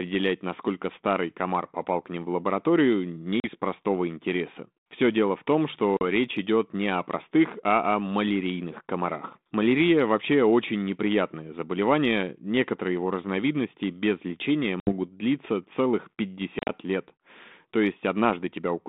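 A speech clip, carried over a G.726 ADPCM line, with packet loss on an ADPCM call. Hard silent gaps hit at 3.40, 5.97, 14.80 and 16.59 s, before "простого интереса" and after "дело в том" and "длиться целых". The last is scattered over 0.1 s. Lost packets leave the decoder's predictor and step size misaligned, so speech resumes with brief, slight distortion.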